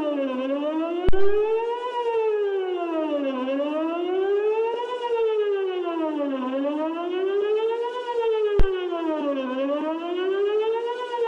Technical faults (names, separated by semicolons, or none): phantom power thump